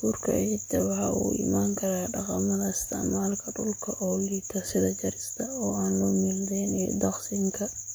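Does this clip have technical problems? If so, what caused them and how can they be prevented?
No, the speech signal shows no technical faults, so there is nothing here that needs preventing.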